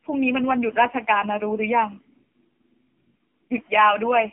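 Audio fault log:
Throughout: AMR narrowband mobile codec. The speech is confined to a telephone band of roughly 250 Hz to 3.5 kHz, and nothing above 3.5 kHz survives. The codec models the vocal tract and excites it with a few pulses per 5 ms slice of each 20 ms frame. Codec damage is heavy here, so the voice sounds buzzy and synthetic. That points to AMR-NB at a low bitrate, which fits about 5.9 kbps.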